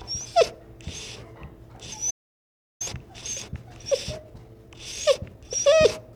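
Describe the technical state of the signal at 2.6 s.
At 2.6 s the signal is in a playback stall, a stretch of silence that runs from 2.10 s to 2.82 s and lasts about 0.7 s. The sounds stop in mid-flow and the output holds at silence until playback recovers. The likely cause is the player running out of data or having its thread blocked. A brief dropout would be a gap of a few milliseconds. This one is long enough to be heard as playback halting.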